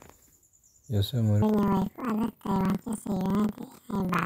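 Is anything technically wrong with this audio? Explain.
Yes. Planar audio read as interleaved, from 1.42 s to the end at 4.26 s. Each block stores all left samples followed by all right samples, but playback reads them as alternating left-right pairs. Each 46.44 ms block, which fits a 2048-sample block, plays twice at double speed, first its left half and then its right, so overall pace holds. The speech jumps an octave high, 12 semitones, with a flutter at the 21.5 Hz block rate.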